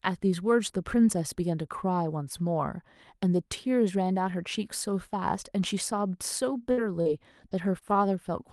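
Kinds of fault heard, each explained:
Repeated packet loss (robotic sound): from 6.71 to 7.98 s, five short dropouts, the longest about 59 ms, are patched by stretching the preceding sound, leaving choppy, robotic speech.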